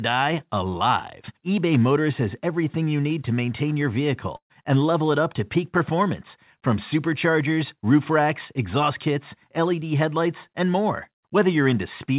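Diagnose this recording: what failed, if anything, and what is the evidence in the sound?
Network stage: a burst of packet loss at 4.36 to 4.52 s removes about 140 ms of speech. The receiver's concealment stretches the last sound and fades it, going silent for the final 90 ms, then playback resumes further on in the speech.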